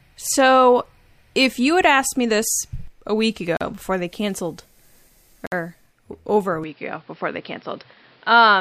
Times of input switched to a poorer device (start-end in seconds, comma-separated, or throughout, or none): 6.64-8.61